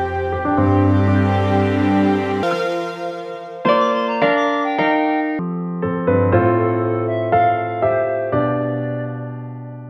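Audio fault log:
2.43–5.39 s, section at the wrong speed: this stretch runs at 1.76 times the rate it was recorded, so everything gets hurried and jumps up in pitch by about ten semitones, with speed and pitch shifting together and snapping back at the far edge. That coupled change is what you get when a chunk of audio is clocked out faster than it went in, most likely from an edit or player working to the wrong rate for that section.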